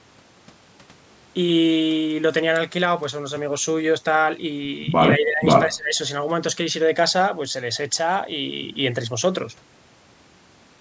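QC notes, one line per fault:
5.16–5.44 s and 5.66–5.99 s, speech suppressed in double talk: the speech dips by about 15 dB, then about 20 dB in the second stretch, for roughly a third of a second each time before recovering. This is likely an echo canceller mistaking the near talker for loudspeaker echo while the far side spoke, and ducking both.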